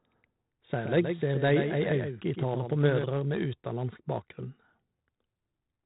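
From the first moment to the end, the speech carries the grit of 4-bit ADPCM compression. Each sample is coded as a coarse step from a predicted value, so the quantising error rides just beneath the signal as a hiss that swells with every loud syllable, and sharp onsets distort where the step size lags behind. The damage is heavy, in a way that fits a 32 kbps stream. Nothing reaches above 3.9 kHz, which dulls the whole clip. On a spectrogram there is a hard ceiling at 3.9 kHz with a grainy noise floor filling the band beneath it that brightens with each loud syllable.

From 0.82 s to 3.04 s, a doubled audio track appears. A second full-band copy of the speech trails the original by roughly a tenth of a second, about 5 dB quieter, with no reverberant tail or room colouring. It is likely a second capture path running behind the first, or two copies left out of step in an edit. It sounds like a dry slapback, and it switches on and off abruptly. 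On a waveform each burst has a smaller twin just behind it. On a spectrogram every syllable is repeated slightly weaker a short distance to its right, beginning and ending with clean vertical edges.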